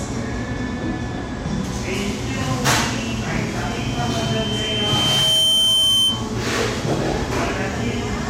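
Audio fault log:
3.60–6.33 s, loudspeaker feedback squeal: a pure tone near 3.1 kHz appears and swells over roughly two seconds until it sits about 5 dB above the rest of the sound. The microphone is hearing the loudspeaker it drives, and at 3.1 kHz the gain around that loop climbs past unity. Each pass round the loop reinforces that one frequency, so it rises into a steady squeal before the loop is broken and it stops.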